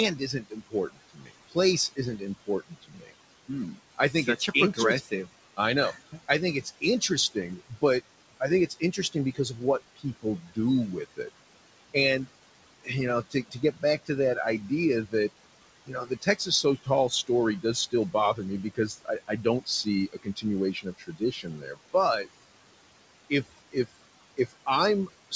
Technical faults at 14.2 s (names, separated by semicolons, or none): noise suppressor artifacts; speech cut by the noise suppressor